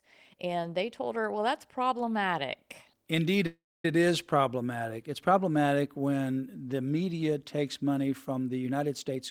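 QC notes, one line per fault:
3.46 to 3.85 s, call audio freeze: the speech stops and the last bit of sound is stretched into a short fading buzz, then about 250 ms of silence before it picks up again. Nothing is skipped; the speech resumes right where it left off, so everything after runs about 0.38 s late. That's likely packets stalling in transit and the jitter buffer running dry, with the receiver padding the wait rather than dropping audio.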